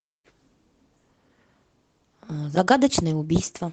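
No audible technical faults.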